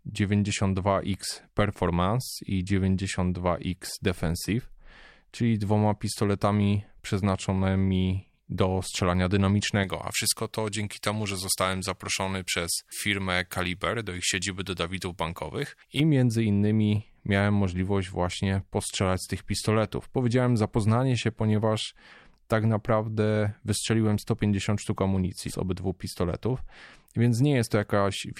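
A thin, bright, hissy edge on the speech from 9.84 to 16.0 s, after "pistoletami przeznaczonymi do strzelania" and before "między innymi miałem możliwość", comes from pre-emphasis left on: the treble boost, consistent with a J.17 curve, was never undone, leaving about 11 dB extra at 10 kHz.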